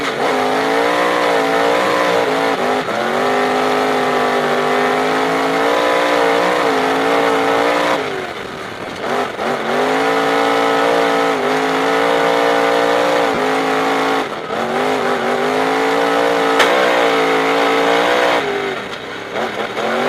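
At 8.85 s and again from 13.35 to 13.38 s there are lost LE Audio frames: about 15 ms of sound goes missing first, then 30 ms, which fits 7.5 ms LC3 frames. The decoder fills each gap by replaying the last spectrum with random signs, so the sound briefly blurs into a noisy smear. Unlike a plain dropout or click, there is no silent hole, and unlike the light lossy compression underneath, the damage is confined to these two short moments.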